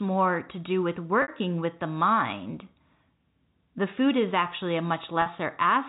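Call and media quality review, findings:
Packet loss with pitch repetition at 1.22–1.28 s (60 ms) and 5.22–5.26 s (40 ms). Brief held, buzzy tone, consistent with three and two 20 ms packets. Receiver concealment repeats the last pitch period. Waveform shows repeating cycles fading out; spectrogram shows frozen harmonic stripes below G.711's 4 kHz ceiling.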